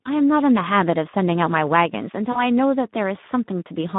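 Speech runs through the Speex codec the whole way, band-limited to about 150 Hz to 3.7 kHz. It sounds hoarse and noisy, which fits a bitrate near 11 kbps. At 2.31 to 2.40 s comes VoIP packet loss concealed by the speech codec. A gap of about 40 ms, which fits two lost frames, is filled with a fading extension of the preceding sound.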